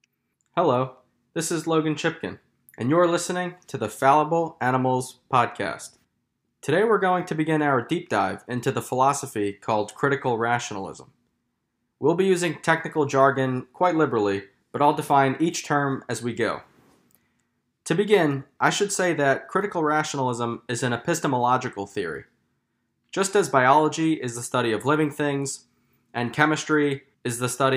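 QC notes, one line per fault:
Nothing to flag here, as the speech comes through with no technical faults to report.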